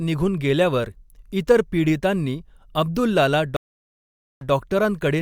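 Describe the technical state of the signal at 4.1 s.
At 4.1 s the signal is in the silent gap of a stream reconnect running from 3.56 to 4.51 s. The connection dropped, leaving about 0.85 s of silence. A new decoder then starts mid-stream, and the speech resumes 0.1 s earlier, repeating a short stretch.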